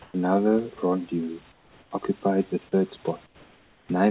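Comfort noise replaces the background at 0.02–0.14 s, 1.52–1.91 s before "occupied the third", and 3.26–3.89 s after it. The room tone turns flat and featureless. It is about 2 dB louder in the first gap and about 4 and 5 dB quieter in the others. Discontinuous transmission likely stopped the sender in the pauses, and the receiver filled them with synthetic noise.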